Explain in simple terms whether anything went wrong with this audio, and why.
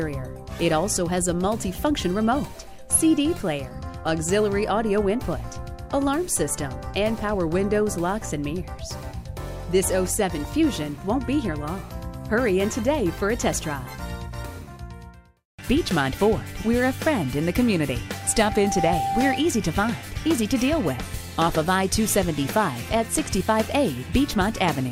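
At 18.12 s a loudspeaker feedback squeal starts. The microphone picks up its own loudspeaker, and a single 784 Hz tone keeps feeding itself and swells over most of a second until it is louder than everything else, stopping at 19.50 s.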